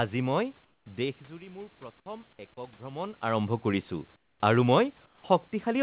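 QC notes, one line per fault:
0.65–0.86 s, 4.16–4.40 s, 5.06–5.24 s, comfort noise in place of the background: room tone turns into a flat, featureless hiss, about 8, 13 and 7 dB quieter, likely from discontinuous transmission.
1.28–3.27 s, automatic gain rising: speech and background swell together by about 4 dB over two seconds as gain control compensates for a quieter input.
2.37 s, onset clipped by the voice detector: speech starts abruptly without its soft beginning, likely because the detector resumed late and 20 ms went unsent.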